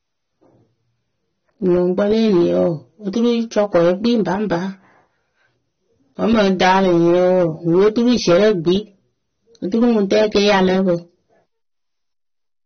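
Across the whole speech clip the audio has nothing above 6.3 kHz, and the codec damage is plainly audible as a dull, smeared top end. This is likely AAC compression, AAC-LC at a low rate that fits about 27 kbps. At that rate the encoder drops the upper band entirely and quantises the remaining spectrum coarsely against its hearing model, discarding detail it judges inaudible.

Hard clipping occurs in four stretches: 1.66 to 2.68 s with about 4 dB of overdrive, 3.24 to 4.55 s at about 9 dB, 6.25 to 8.75 s at about 13 dB, and 9.74 to 10.94 s at about 10 dB. In each, the signal exceeded what a stage could pass, so peaks were cut flat. Those flat tops generate added harmonics, heard as distortion on the louder parts, with the 6.25 s stretch overdriven most.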